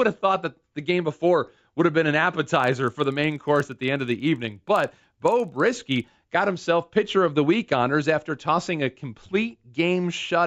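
From 2.56 to 6.2 s, between "would have been an" and "got himself pitcher of", a resampler restarted on every block leaves edge errors. They are heard as a 25 Hz buzzy ticking, consistent with 40 ms blocks, and show as evenly spaced thin vertical lines on a spectrogram.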